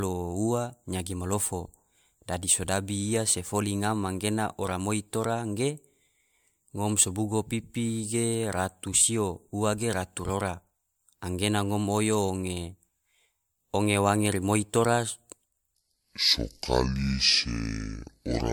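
It's a speech clip with generation loss all the way through: a swirly, hollow, smeared sound with soft attacks, likely from about three rounds of MP3 encoding, consistent with rates near 112 kbit/s. From 15.75 s to the end there's a section at the wrong speed, running at 0.6 times normal and dropping roughly ten semitones, so it sounds deep and dragging, likely from playback against the wrong clock.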